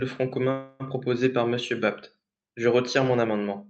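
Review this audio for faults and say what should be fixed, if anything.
From 0.51 to 0.83 s, before "proposé par", a call audio freeze stretches the last sound into a fading buzz, likely from late packets draining the jitter buffer. It then resumes where it stopped, with nothing skipped as packet loss would cause. A larger adaptive jitter buffer and steadier network delivery would prevent it.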